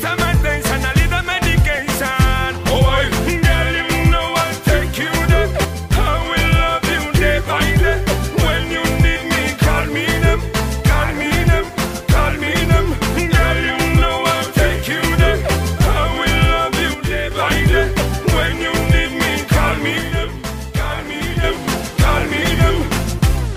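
A likely one channel drop-out in the stereo feed, from 5.65 to 5.92 s, 16.94 to 17.31 s and 19.98 to 21.44 s, makes the sound fall abruptly by about 6 dB after the mono sum, with anything carried only on the lost side vanishing until it returns.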